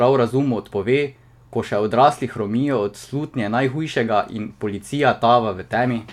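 No technical faults are audible.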